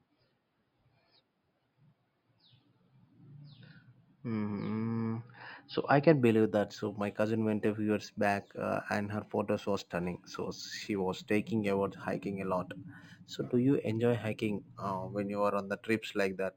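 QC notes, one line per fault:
6.21 s to 16.56 s, imaging from linear upsampling: from just after "I can", the top end dulls and a faint metallic shimmer rides on sibilants. The sound points to straight-line interpolation, fitting an 11 kHz to 44.1 kHz conversion, leaving mirrored images between 5.5 kHz and 11 kHz, roughly 30 dB down.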